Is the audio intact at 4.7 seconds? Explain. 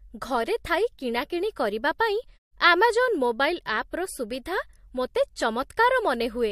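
Yes, the speech is intact at 4.7 seconds, with no fault at that moment.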